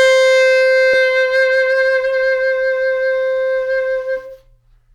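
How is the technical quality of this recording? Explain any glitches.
Two glitches are in here, both from network playback, and they sit close together early in the music.

At about 0.93 s there's a skip ahead. Roughly a third of a second of music simply isn't there. The receiver dropped that chunk, either in transit or by discarding it when the buffer overflowed, and jumped straight to audio that was already queued. Nothing fills the hole; the two sides are butted together with only a very short join of about 25 ms, finishing around 1.07 s. You hear the music lurch forward, as if a bit of the phrase got snipped out.

Then from about 1.50 to 1.90 s there's a jitter buffer speed-up. With extra audio piled up in the buffer, the receiver trimmed out lots of tiny pitch-period-sized slices in a row to bring the delay back down, about 50 ms in all. Playback runs at roughly 112% speed there while the pitch holds steady, so that stretch feels rushed and the tempo briefly pushes ahead before settling back.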